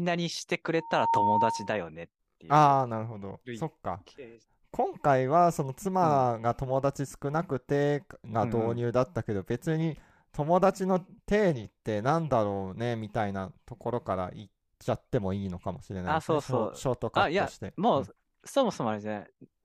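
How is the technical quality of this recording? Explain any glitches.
There's one clear glitch near the start. From about 0.78 to 1.87 s there's loudspeaker feedback squeal: the mic is catching its own speaker, and the loop runs away at 920 Hz. The tone swells up over roughly a third of a second and ends up sitting a few dB above the speech before it cuts out.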